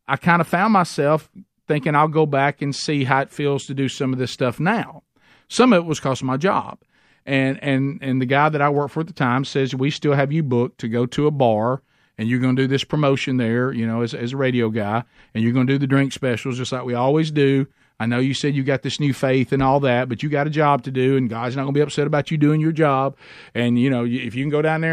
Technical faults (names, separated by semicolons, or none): GSM signalling bursts